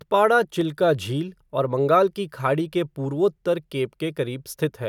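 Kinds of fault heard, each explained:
Dropped samples: at 0.61 s, just before "झील और बंगाल की", the speech carries a single sharp click, seen as a thin vertical line running up the whole spectrum. The likely cause is a tiny gap in the sample stream, a fraction of a millisecond, so the waveform jumps straight from one value to a later one. That step is far too brief to remove any audible sound, but the instantaneous discontinuity spreads energy across all frequencies, producing the click.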